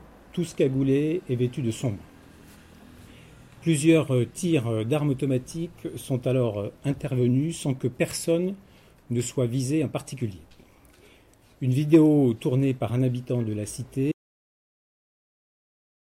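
At 14.12 s the sound cuts off abruptly in mid-flow and does not return. This is an audio dropout to silence: from that point to the end, about 2.03 s, the track is silent, with no room tone, hiss or decay tail. The likely cause is a lost input, such as a disconnected device, a failed link or an unintended mute, while recording continued. Whatever occurred during those final seconds is not recoverable from this audio.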